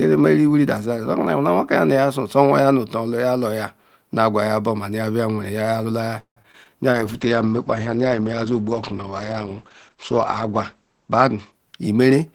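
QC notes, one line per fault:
6.19–6.71 s, repeated packet loss (robotic sound): four gaps in half a second, the longest 170 ms, each bridged by stretching the preceding sound, so nearly half the span is synthetic, with about 60 ms simply missing. Unlike a bitrate drop, the damage comes in choppy bursts rather than a steady dulling.
6.93–12.34 s, call bitrate drop: the encoder falls from 32 to 9 kbps and stays at the floor for about 3.7 s, so the speech is coded coarsely and the top end is cut from 20 kHz to 8 kHz. It sounds continuously muffled and watery, without gaps or stutter, which separates it from packet loss.
11.18–11.66 s, jitter buffer speed-up: the receiver trims roughly 50 ms of pitch-period slices to drain excess buffered delay, so speech runs about 9% fast at unchanged pitch and sounds briefly hurried. A pitch shift or resampling error would change the voice's pitch; this does not.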